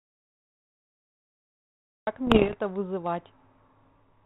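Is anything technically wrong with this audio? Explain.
Yes, two things. From the very start to 2.07 s the audio is dead silent, no room tone at all. That's an audio dropout to silence, likely a lost input while the recorder kept writing silence. Then from about 2.26 to 2.56 s there are pops and rough, gritty bursts with the level jumping around. That's bit errors on an ADPCM link, with roughly one to two percent of bits flipped. Each flipped bit throws off the decoder's step size and prediction, so the damage rings on briefly instead of being a single click. The underlying narrowband G.726 coding, which fits 32 kbit/s, sounds as expected around it.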